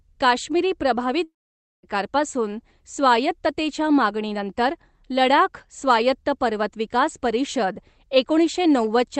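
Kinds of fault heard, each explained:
Long network dropout: At 1.23 s the speech cuts out and 0.6 s of audio is lost. The last sound trails on as a fading buzz. Then near-silence holds until 1.86 s. This is likely packets failing to arrive while the receiver papers over the gap.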